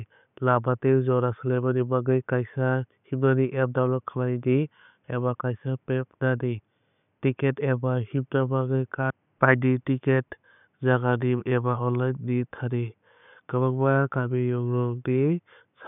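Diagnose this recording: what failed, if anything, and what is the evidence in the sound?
Nothing in the chain failed here, and the sound carries no evidence of a fault at any stage. The only thing beneath the speech is the room noise at the microphone, sitting about 49 dB below it, which belongs to the recording itself.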